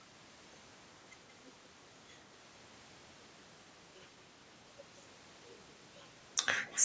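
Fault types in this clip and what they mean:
Echo leak: from 6.66 to 6.84 s, a faint delayed copy of the speech trails about 171 ms behind, roughly 15 dB quieter. The likely cause is a loudspeaker on the other end whose echo canceller didn't fully remove its microphone pickup.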